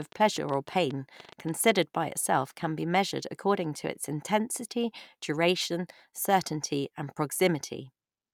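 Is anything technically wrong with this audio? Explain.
Yes. From 0.02 to 1.5 s at the very start, there's a train of clicks running under the speech: about fifteen of them, roughly 9.5 per second, spaced unevenly, and they poke up about 5 dB above the signal. They all have much the same sharp, popping shape, so it sounds like ticking laid over the voice. That's likely interference from nearby equipment or a faulty connection or power supply injecting short pulses into the signal path.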